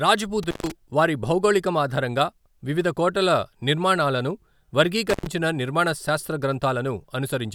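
Intermittent contact at 0.43 to 0.72 s and 5.10 to 5.27 s in this speech clip: a loose connection briefly opens, dropping the signal for about 133 ms and 98 ms with crackle at each break, before "వారి భౌగోళికం ఆధారంగా వివిధ" and "నిర్మాణ శాస్త్ర" respectively.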